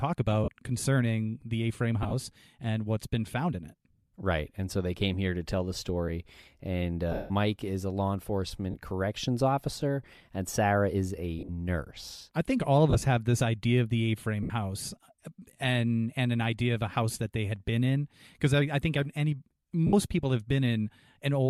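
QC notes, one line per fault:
0.44, 2.03–2.14, 7.12–7.31, 8.71, 11.39–11.50, 12.90–13.02, 14.43–14.50, 19.87–19.93 s: lost LE Audio frames. Each gap is 30–170 ms of dropped audio, consistent with 10 ms LC3 frames. The decoder repeats the last spectrum with random signs, so speech turns into a brief noisy smear. On the spectrogram these show as smeared, harmonic-free blocks. The longest loss, at 7.12 s with a run of about 150 ms, fades toward silence in the waveform as concealment gives up.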